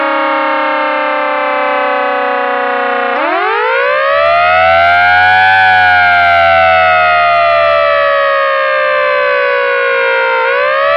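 No technical faults are audible.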